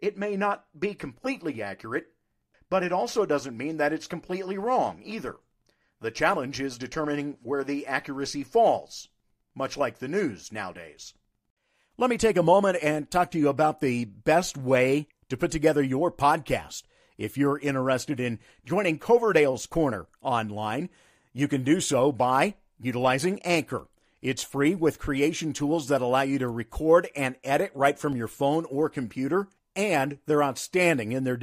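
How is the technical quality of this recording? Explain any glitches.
Two brief repeated-buffer glitches occur. At 1.17 s, after "may not be", a 1.33 ms slice, which fits a 64-sample buffer, plays twice more; at 28.12 s, between "and edit right from" and "your phone or computer", once more. Each is heard as a click, seen as a hard waveform discontinuity and a thin vertical broadband streak.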